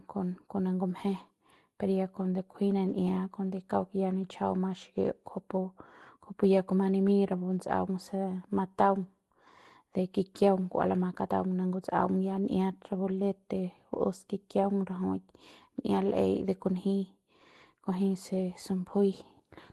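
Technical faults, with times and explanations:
2.53 to 3.25 s, scattered short gaps: around five packets were lost or late, and the receiver stretched the preceding sound over each, leaving ticks and smears.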